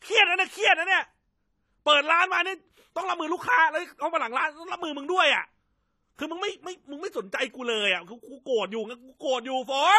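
From start to end, the speech carries AAC compression damage, likely from low-bitrate coding, which fits about 32 kbps. Nothing is heard above 14 kHz, leaving a dull, smeared sound.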